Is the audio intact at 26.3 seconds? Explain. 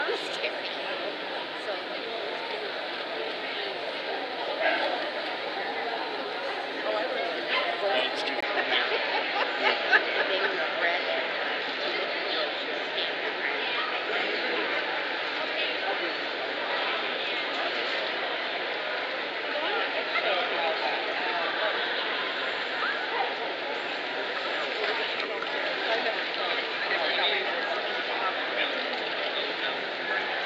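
No, from 8.41 s to the end the input has likely switched to a poorer device: a 20 ms gap, then a duller sound cut off above 7.6 kHz with fresh background noise.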